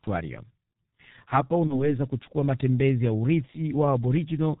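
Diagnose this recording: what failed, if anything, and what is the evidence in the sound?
The codec stage is at fault throughout: the G.723.1 codec has left the speech heavily damaged. Nothing sounds above 4 kHz, the voice is muffled and hoarse, and consonants smear. That fits the 6.3 kbit/s mode, whose 30 ms frames track the voice only slowly.

The network stage adds VoIP packet loss concealed by the speech codec from 1.67 to 1.99 s, just before "kuchukua matembezi ya". The sound is stretched into a buzzy tone or a coloured noise that fades, which points to one lost 30 ms frame. The decoder's rebuilt state keeps the speech degraded for about 0.3 s.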